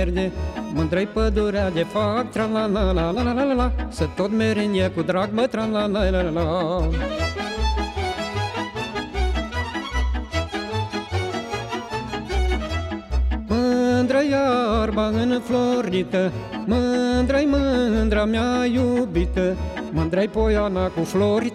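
No faults detected anywhere in the recording; nothing to report.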